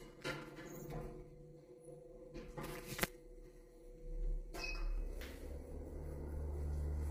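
From the start to 4.98 s, channel delay causes comb filtering. One channel lags by about 5 ms, so the mono sum cancels near 100 Hz and its odd multiples, sounding hollow and phasey.

Throughout, the sound is rough and grainy, with noise between harmonics and a lowered or synthetic top band. The likely cause is heavy low-delay AAC compression, which fits a bitrate around 24 kbps.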